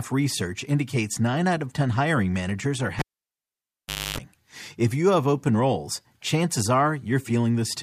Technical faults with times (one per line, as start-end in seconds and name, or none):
2.99-4.18 cable pulled and plugged in